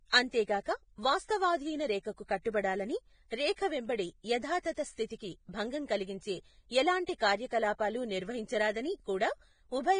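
Vorbis compression, likely the cause, runs throughout the speech: nothing sounds above 9.7 kHz, and the upper treble is quantised so coarsely that its fine detail turns to hissy, grainy noise, roughening tones and smearing consonant attacks, as heavy damage at a bitrate near 22 kbps would.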